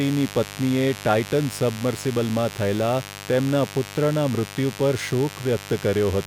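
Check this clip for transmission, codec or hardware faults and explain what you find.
There's mains buzz under the speech from start to finish. It's locked to 50 Hz mains, with sharp switching spikes twice per cycle from something like a dimmer, rectifier or missing shield, piling up harmonics into several kHz. It sounds like a steady, raspy buzz sitting fairly loud, not far beneath the speech.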